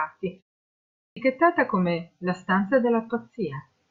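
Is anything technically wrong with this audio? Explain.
Yes. After a pause of about 0.41 s, the output device has gone idle and needs time to wake, so from 0.75 to 1.17 s roughly 415 ms of speech is swallowed: a clipped start after a pause, with "come la stanza" bursting abruptly out of silence.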